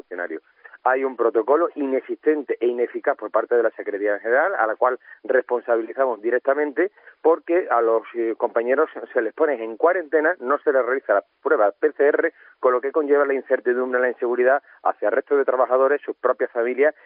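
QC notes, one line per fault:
No faults heard in this clip.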